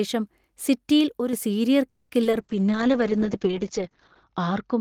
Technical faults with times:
1.19-1.33 one channel drops out
1.89-2.11 call audio freeze
2.23-2.35 short concealed packet loss
2.40-4.80 call bitrate drop

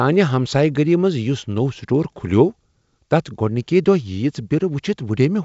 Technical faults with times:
none

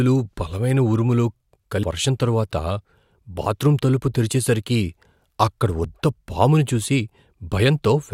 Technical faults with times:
1.83 damaged data in a compressed stream
5.84 damaged data in a compressed stream

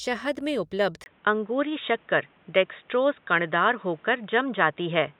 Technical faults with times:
1.04-5.20 input switched to a poorer device

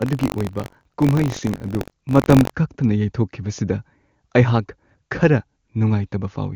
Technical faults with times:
0.00-2.52 buffer tearing

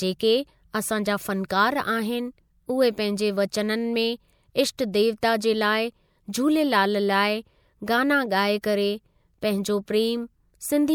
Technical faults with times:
1.48 pre-echo
4.78 pre-echo
5.21 pre-echo
8.62-8.64 pre-echo
9.41 pre-echo

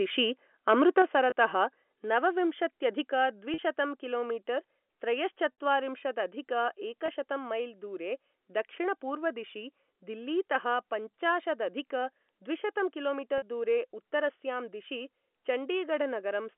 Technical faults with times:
0.69-1.02 microphone overload
1.02 microphone volume stepped down
1.30-1.32 packet loss with pitch repetition
2.04 microphone volume stepped down
3.06 microphone volume stepped down
3.54-3.58 packet loss with pitch repetition
5.53 packet loss with pitch repetition
7.06-7.08 packet loss with pitch repetition
13.38-13.42 packet loss with pitch repetition

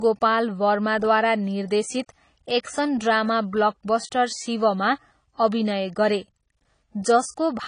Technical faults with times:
0.00-7.68 AAC compression

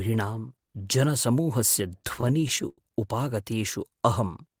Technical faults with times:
2.02-2.78 repeated stalls (stutter)

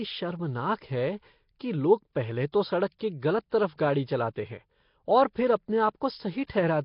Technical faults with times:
0.00-6.85 Nellymoser compression
2.52 pre-echo
2.99 pre-echo
3.50-3.52 pre-echo
3.78 pre-echo
6.47-6.50 pre-echo

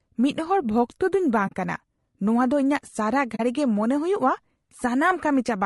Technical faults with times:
0.00-5.66 low-delay AAC compression
1.47-1.53 AAC frame loss with muting
3.35-3.40 AAC frame loss with muting

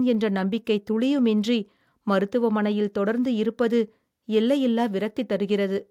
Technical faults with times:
none

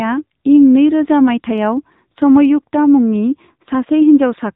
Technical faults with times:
0.00-4.55 AMR narrowband mobile codec
1.49-2.48 block size mismatch (truncated)

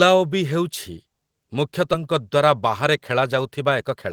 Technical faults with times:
1.93-1.95 skip ahead
3.63-4.12 jitter buffer speed-up

